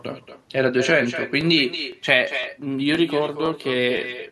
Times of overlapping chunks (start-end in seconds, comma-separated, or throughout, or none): 0.39, 0.90, 1.41, 1.92, 2.43, 2.95, 3.46, 3.97